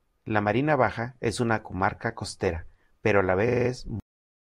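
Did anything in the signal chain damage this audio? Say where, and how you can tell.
Yes. Just after "comarca costera pero a", from 3.47 to 3.68 s, the same 42.7 ms slice plays five extra times, adding about 213 ms. These are repeated frames at the codec or storage stage. On a spectrogram, identical blocks tile side by side. The block length fits a pair of compressed frames.

The second fault is a cut-off end in storage or playback. At 4.00 s the sound stops mid-event and drops straight to digital silence, with no decay tail, because the final buffers were never written out. The waveform shows a flat silent line from there to the end. The spectrogram shows a sharp vertical edge followed by blank space.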